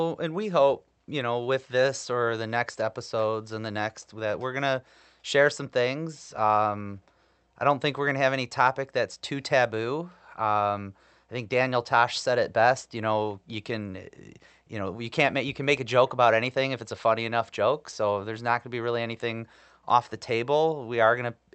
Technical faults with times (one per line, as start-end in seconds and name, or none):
none